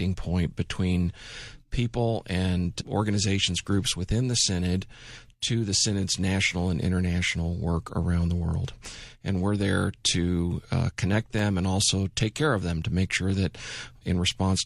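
No technical faults can be heard anywhere in this speech recording. Nothing in it points to a problem in how the sound was captured, carried or played back.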